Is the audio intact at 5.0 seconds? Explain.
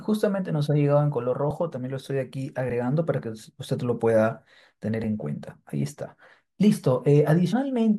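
No. At 5.04 s the speech lurches forward by a few milliseconds. This is compressed frames skipped: a couple of encoded frames never reached the output, either missing from the file or rejected by the decoder as damaged, so playback jumped ahead.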